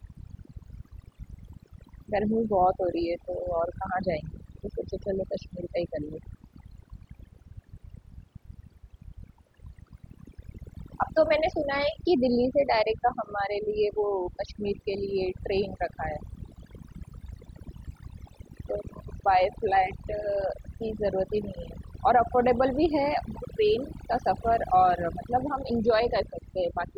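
Overdone noise removal runs through the whole speech recording. The noise reducer was set too aggressively, pulling individual frequency bands down or out whenever they sat near its noise estimate. The background drops and breaks up into twinkling, warbling specks.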